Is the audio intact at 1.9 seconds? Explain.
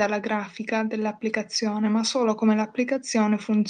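Yes, the audio is intact at 1.9 seconds, with no fault audible at that moment.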